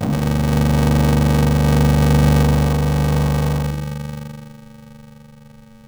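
From start to finish, interleaved audio read as planar: 2.9 ms blocks, fitting 128 samples, buzz dull and robotic at 345 Hz, without the octave drop longer blocks would cause.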